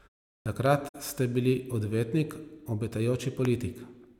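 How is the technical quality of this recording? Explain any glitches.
The recording has three kinds of glitch, all within the first second except one late pop.

Clipped start after a pause, at 0.42 s: after 0.42 s of silence the output device had gone idle and needed time to wake, so about 39 ms of the opening speech is swallowed and the sound begins abruptly, missing its first sounds.

Loud pop, at 0.66 s and 3.45 s: each is a single sharp pop riding on top of the speech, which continues underneath. The first peaks about 10 dB above the signal, the second about 15 dB. Likely cause: a sudden voltage pulse from a switch, plug, static or driver glitch.

AAC frame loss with muting, from 0.88 to 0.95 s: the decoder lost data and zeroed the spectrum, leaving a 64 ms gap that fits about three missing frames. The overlapping windows fade the sound out and back in, giving a soft-edged hole.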